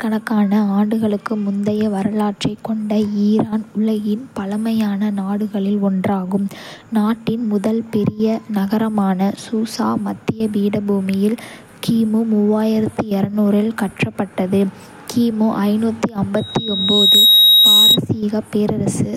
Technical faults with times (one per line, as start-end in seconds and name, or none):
16.36-17.98 loudspeaker feedback squeal